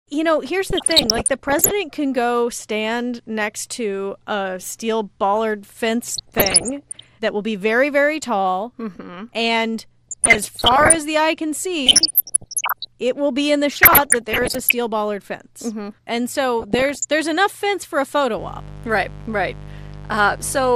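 MP2 compression runs through the whole speech clip: the sound is dull and carries a gurgling, granular roughness, as though the upper range keeps switching in and out. This is likely Layer II coding at too low a bitrate, with the damage plainly audible and consistent with roughly 80 kbps. Starved of bits, the coder shuts off whole upper sub-bands and quantises the remaining ones coarsely, which produces the flickering, grainy texture.

DAB burbling breaks in six times: 0.70 to 1.71 s, 6.08 to 7.09 s, 10.07 to 10.98 s, 11.86 to 12.87 s, 13.71 to 14.72 s (after "will be in the" and before "bollard fence"), and 16.60 to 17.12 s (just before "enough fence for a"). Each burst lays short blips of noise over the speech. Weak reception let bit errors get past the error correction, at a rate of very roughly half a percent to one and a half percent. Corrupted samples put short blips of noise in single sub-bands, and corrupted scale factors make sub-bands jump in level for up to a frame. 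The bursts each span dozens of consecutive frames, the last one noticeably shorter.

Mains buzz starts after "enough fence for a" at 18.35 s and lasts to the end at 20.76 s. It is a steady, raspy buzz built on 50 Hz, at about 15 dB below the speech. Sharp switching spikes from a dimmer, a rectifier or a missing shield arrive twice per mains cycle and spread harmonics up into the kilohertz range.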